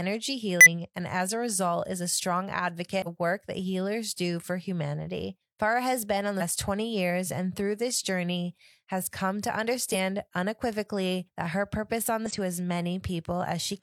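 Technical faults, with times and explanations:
0.61–0.67 s (just before "and as a result"), 3.02–3.08 s (between "result is a strong" and "work that healers do"), 6.37–6.42 s, 9.90–9.96 s (after "journey has come to") and 12.26–12.32 s: damaged data in a compressed stream. Each is a brief disruption, as the decoder misreads corrupted frames and hunts for the next valid header.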